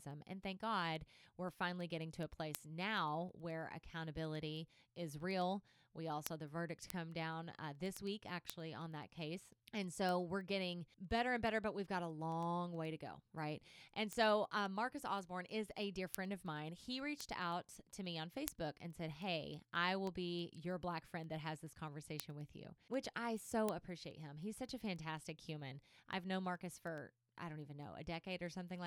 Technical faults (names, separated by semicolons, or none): word clock ticks